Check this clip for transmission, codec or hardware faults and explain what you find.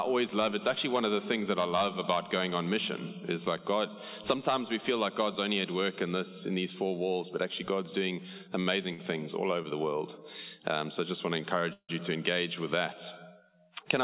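Three transmission faults appear, all delays rather than losses, heard through a telephone-band call path whose cut-off at 4 kHz fits G.711 mu-law.

Short stalls from a late packet at 8.60–8.69 s and 8.94–9.03 s: each time a packet arrived late and the jitter buffer ran dry, so the receiver stretched the last sound by about 55 ms and 48 ms, giving a held, faintly buzzy moment before playback resumed.

Call audio freeze at 11.73–11.92 s: packets were likely held up in transit and the jitter buffer emptied, so about 160 ms of filler was inserted, a fading continuation falling into roughly 90 ms of silence before the audio picks up where it stopped.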